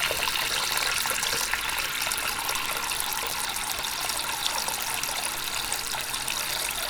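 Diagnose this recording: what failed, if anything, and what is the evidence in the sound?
The failure is at the converter stage: word clock ticks on a digital link whose receiver is not locked to the sender's clock. From 0.12 s to 6.87 s the sound carries sharp ticks of uneven strength at a steady rate of about one every 20 ms, a few hundred in all. Each one is a single sample dropped or repeated as the two clocks slip, pointing to a mismatch of roughly 0.1 percent. Buffer underruns would leave audible gaps and irregular spacing, but these ticks are single-sample and evenly spaced.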